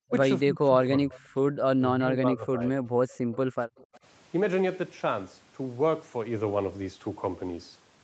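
Speech suppressed in double talk, 0.45 to 1.31 s and again 1.79 to 2.61 s: the talker dips by roughly 20 dB in the first stretch and about 15 dB in the second, fading in pieces. The likely cause is an echo canceller that could not tell the near talker from loudspeaker echo while both sides spoke, so it turned everything down.

Echo leak, 1.14 to 1.20 s and 3.78 to 3.98 s: a faint copy of the voice, around 25 to 30 dB below the speech and trailing by 259 ms, slips through in short scraps. This is likely loudspeaker sound the canceller failed to remove being sent back.

Background gated by the echo canceller, 2.91 to 3.57 s and 3.75 to 3.94 s: the room sound drops out, by about 26 dB and then about 20 dB, as the canceller clamps the microphone while the loudspeaker plays, then recovers when it releases.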